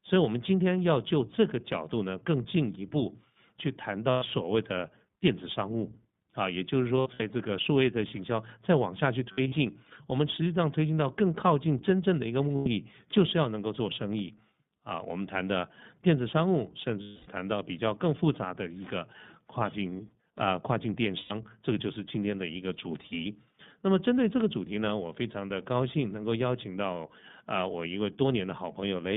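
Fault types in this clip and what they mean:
iLBC codec, throughout: Audible damage from a narrowband VoIP codec, likely in its 15.2 kbps mode with 20 ms frames. The sound is confined to about 150 Hz to 3.6 kHz, with nothing higher, and has a plainly rough, slightly synthetic edge from coarsely coded excitation.
lost iLBC frames, at 4.10–4.24, 6.97–7.22, 9.32–9.54, 12.56–12.68, 17.02–17.28 and 21.18–21.32 s: Missing packets are bridged by repeating the last pitch cycle mixed with noise. Each gap is a held, buzzy vowel, longest near 17.0 s, and the voice is right again almost at once.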